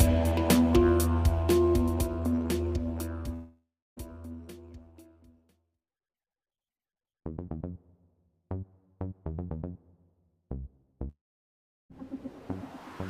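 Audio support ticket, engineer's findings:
Long network dropout, likely packet stream interruption at the receiver, 3.33–3.99 s: roughly 0.64 s of audio never arrives. Concealment stretches the last sound into a fading buzz or hiss, then about 0.31 s of silence. Playback resumes with the lost span gone.

Same fault, 11.09–11.92 s: gap of about 0.82 s. Brief decaying fill, then roughly 0.73 s near-silent before sound returns, missing content skipped.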